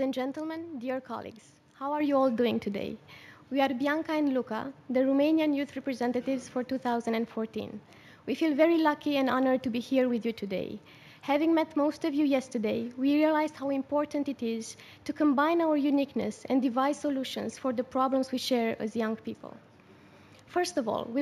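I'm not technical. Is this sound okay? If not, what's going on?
No. All the way through, the top end sounds dull, and there's a faint metallic shimmer riding on the sharpest, brightest sounds. This is imaging from linear upsampling. The audio was converted to a higher sample rate, which fits a change from 16 kHz to 48 kHz, by simply joining the original samples with straight lines. That crude method softens the highest part of the original sound and leaves faint mirror copies of it between 8 and 16 kHz, which you hear as that shimmer.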